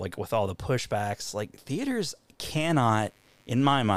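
From 2.71 s, right after "the pushbacks like theaters", a mains buzz enters and runs to the end of the clip. Switching spikes at twice the 50 Hz mains rate leak in, spreading harmonics into the kilohertz range, heard as a raspy buzz roughly 40 dB below the speech.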